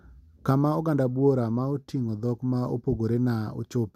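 No technical faults can be heard anywhere in this recording.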